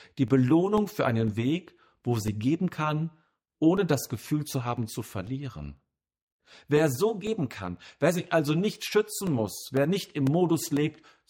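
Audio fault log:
0.28–10.77 s: periodic USB or driver dropouts. Every 0.5 s a brief slice of the speech, about 2 ms, is lost and replaced with silence, around twenty times in all. Each gap cuts the waveform abruptly, so it is heard as a small tick or pop. Because the gaps are evenly spaced, they fall into a steady rhythm that is audible only while speech is present. This pattern points to a background task stalling the USB bus or audio driver at a fixed interval.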